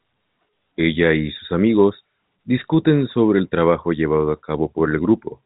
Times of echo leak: none

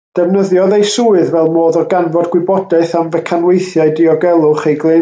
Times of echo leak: none

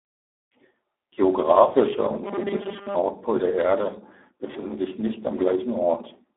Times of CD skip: none

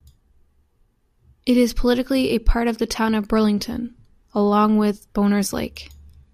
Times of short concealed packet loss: none

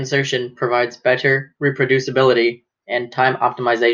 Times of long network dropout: none

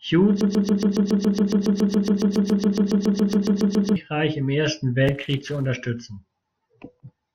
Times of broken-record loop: 0.41-3.96

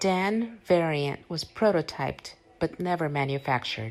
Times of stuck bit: none

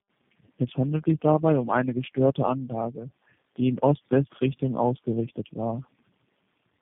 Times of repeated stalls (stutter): none

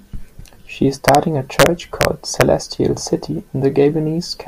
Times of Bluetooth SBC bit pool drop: none

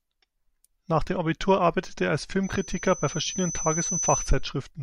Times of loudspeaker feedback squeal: 2.43-4.46

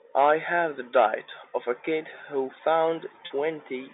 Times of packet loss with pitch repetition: 3.26-3.30

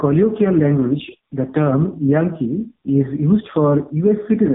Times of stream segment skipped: none

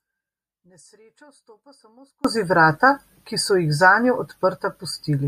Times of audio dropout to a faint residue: 0.00-2.24

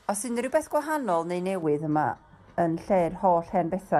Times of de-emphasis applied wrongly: 1.63-3.99

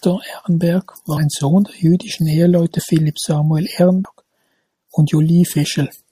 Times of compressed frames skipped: 1.16, 2.78, 4.04

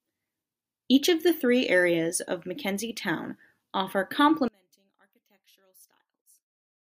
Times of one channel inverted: 4.48-6.89

